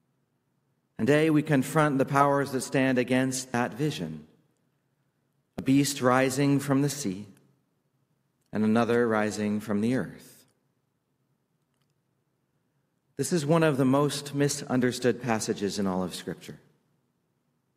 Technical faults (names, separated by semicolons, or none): dropped buffer (overrun)